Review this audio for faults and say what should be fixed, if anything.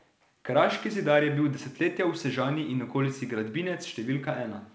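Nothing here needs fixing: the speech comes through a working call path whose band stops at 8 kHz, which fits a wideband codec such as G.722 at around 64 kbps, and the audio shows no faults.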